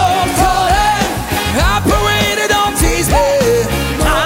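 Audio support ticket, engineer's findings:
Block size mismatch (padded), throughout the clip. Steady buzz at 43.1 Hz under the audio, matching the block rate; fits a reader pulling 1024-sample blocks. Probable component: the handoff between two buffering stages. Upstream writes slightly short blocks; downstream reads full 1024 and fills the remainder with zeros, so each block carries a brief silent gap. Playback runs at 0.999x, about 0.1% slow, too little to hear. Fix: align the writer and reader block sizes.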